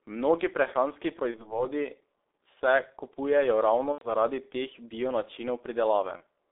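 G.723.1 codec damage runs from start to finish: the speech is squeezed into a 300 Hz to 3.6 kHz telephone band and coded in coarse 30 ms frames, leaving it muffled and hoarse with smeared consonants, a heavy degradation that fits a rate of around 6.3 kbit/s.

VoIP packet loss concealed by the speech codec occurs at 1.31 to 1.64 s, 3.92 to 4.09 s and 6.17 to 6.22 s. Each time the decoder fills the gap by repeating its last pitch and filter at falling gain, so the speech smears into a buzzy tone or coloured noise that fades. The first and last gaps suggest a single lost frame and the middle one about three, roughly 90 ms. Recovery lags after each gap as the decoder rebuilds its state.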